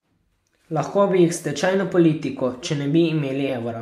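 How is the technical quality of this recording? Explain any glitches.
No technical glitches can be heard anywhere in this speech recording. There is nothing in it that calls for an explanation.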